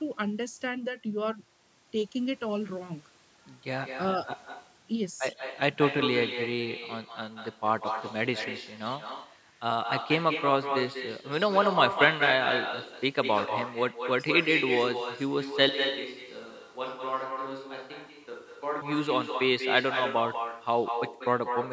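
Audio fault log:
Throughout, echo with no canceller: every phrase is trailed by a second, fainter copy arriving roughly a fifth of a second later, only about 6 dB below the speech and sounding thinner than the original. The far end is evidently playing the call through a loudspeaker that its own microphone picks up, and with nothing subtracting that pickup, the talker's audio travels back across the network round trip and lands on top of what follows.
15.69 to 18.81 s, switch to a distant microphone: the speech abruptly turns hollow and roomy, losing its low-end body and dropping around 10 dB in level, while a bed of room noise sits well beneath it, perhaps 35 dB down. At 18.81 s it snaps straight back to the close, full sound. The likely cause is the close microphone's signal failing or being bypassed for these three seconds, leaving a microphone further from the talker to carry the recording.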